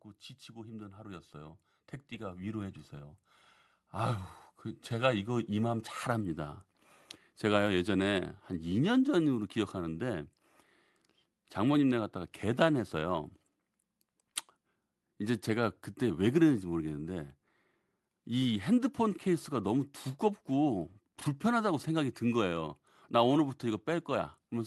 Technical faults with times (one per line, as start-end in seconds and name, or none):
0.45-6.65 automatic gain rising